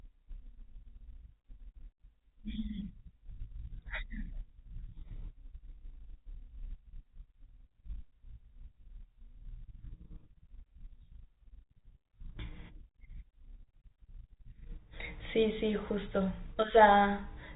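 Nothing in this speech recording stood out as a technical problem on listening.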